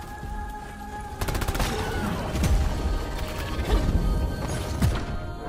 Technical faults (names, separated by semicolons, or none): none